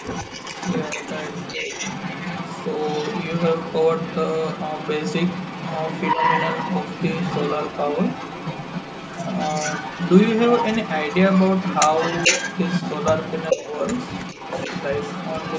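From the start to the end of the clip, the far end's echo canceller has likely failed to remove all of what its microphone picked up from a loudspeaker, and the residue is sent back as an echo leak. A second copy of the speech trails the original by about 433 ms, roughly 10 dB below it, so a quieter repeat of the voice comes back behind it, in scraps or longer stretches, making the talk sound doubled.

The same canceller likely also mistakes overlapping talk for echo, giving speech suppressed in double talk at 1.55 to 1.73 s, 6.15 to 6.21 s and 13.54 to 13.6 s. In each spot it turns the talker down by up to about 5 dB, and the level briefly sags for roughly 200 ms in the first case and about 70 ms in the other two. The call's microphone processing, with nothing above 8 kHz, sits under all of this.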